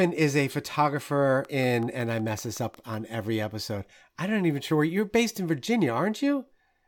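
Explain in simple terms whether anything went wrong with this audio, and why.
Yes, something went wrong. From 1.45 to 2.95 s, right after "is a photographer" and before "every episode I don't", a train of clicks appears: about ten similar ticks at a steady 5.4 per second, roughly as loud as the speech. Likely cause: electrical interference from nearby equipment or a faulty connection or power supply.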